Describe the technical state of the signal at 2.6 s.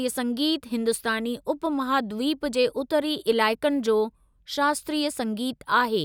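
At 2.6 s the speech signal is intact, with no audible technical fault at that moment.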